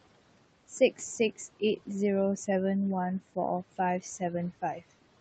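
Noise suppressor artifacts run throughout: steady room noise is pulled down by about 18 dB between phrases and returns under the voice.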